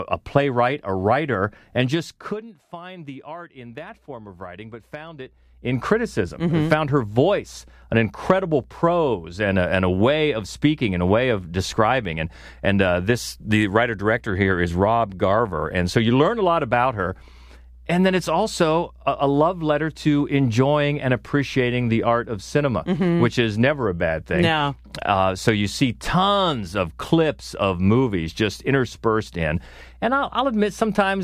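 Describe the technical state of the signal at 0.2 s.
At 0.2 s the speech signal is intact, with no audible fault at that point.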